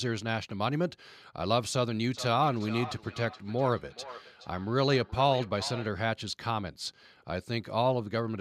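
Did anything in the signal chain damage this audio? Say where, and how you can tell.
Yes. From 2.14 to 5.95 s the speech returns at a steady interval of roughly 0.4 s, peaking at about -14 dB below the direct speech. This is feedback echo between two devices at the call-processing stage: one device's playback is recaptured by the other's microphone, which its echo canceller cannot remove.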